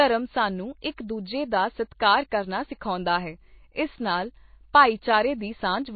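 From start to finish the speech carries plainly audible damage of the kind that points to MP3 compression, likely at a low bitrate in the region of 24 kbps. Nothing sounds above 4.5 kHz, so the speech is dull and muffled, and weak frequency detail flickers in and out between frames, giving a watery, swirling texture. A spectrogram would show a hard ceiling at 4.5 kHz, with patchy, blocky energy below it where components blink on and off.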